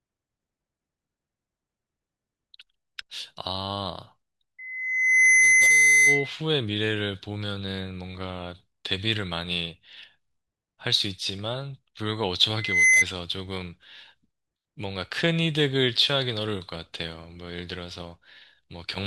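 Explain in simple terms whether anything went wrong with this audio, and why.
A piercing whistle swells up at 4.58 s and lasts until 6.36 s, then returns briefly from 12.56 to 13.05 s, both times a single high 2 kHz tone, louder than the speech. This is loudspeaker feedback squeal: the microphone picked up its own loudspeaker, and that pitch kept amplifying itself.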